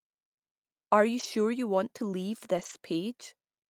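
A speech clip with two brief rough patches. Each is a lost packet rebuilt from error correction. The next packet carried a low-bitrate copy, and the decoder played it, so nothing drops out. From 1.19 to 1.25 s, just before "you want to leave", about 40 ms sounds grainy and noisier, which fits two lost packets. From 2.57 to 2.75 s, after "you want to leave", about 100 ms turns coarser, which points to roughly five packets lost.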